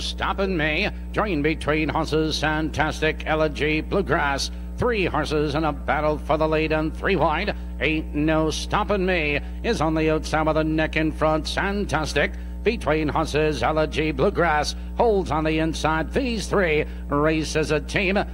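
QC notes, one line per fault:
Throughout: mains hum, a steady 60 Hz tone with low harmonics sitting roughly 10 dB below the signal, from power-line coupling through a ground loop or transformer.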